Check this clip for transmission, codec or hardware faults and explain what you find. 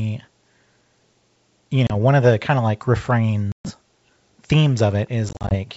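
Three dropouts point to packet loss on an ADPCM call. The first is at 1.87–1.93 s, about 30 ms lost, just before "one of the kind". The second is at 3.52–3.74 s, with 130 ms lost. The third is at 5.29–5.57 s, where 120 ms drops out in short gaps, the longest 40 ms. Each hole is silent and hard-edged. Afterwards the decoder's predictor and step size no longer match the sender's, so the speech returns slightly distorted. It settles within tens of milliseconds.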